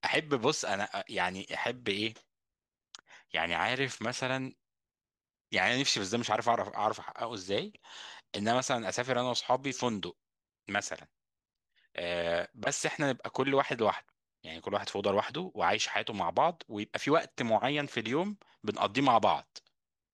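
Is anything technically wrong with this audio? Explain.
No, nothing technically wrong can be heard in this speech recording. There are no faults to point to at any moment in the clip.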